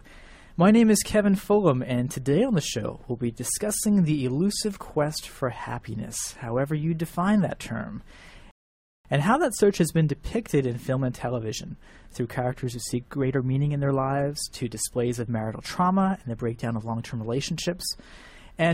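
At 8.51 s the sound drops into a rebuffering stall: the player exhausted its downloaded audio and halted until more arrived, leaving silence until 9.05 s. Playback then resumes exactly where it stopped, with nothing skipped but 0.54 s added. On a waveform this is a flat gap, and on a spectrogram it is a blank vertical band.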